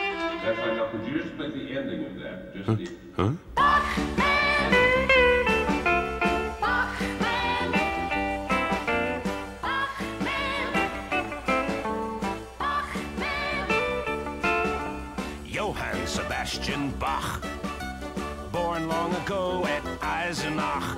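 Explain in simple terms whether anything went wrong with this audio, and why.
Nothing stood out on listening, so there is no problem to point to in this recording.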